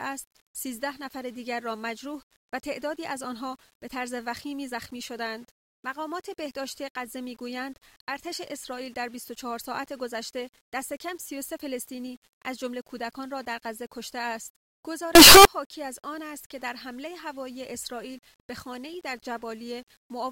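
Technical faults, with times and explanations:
15.15 to 15.45 s, signed and unsigned mixed up: a very loud, harsh distortion burst, quiet parts as loud as loud ones, likely from a flipped top bit that turns each zero crossing into a jump.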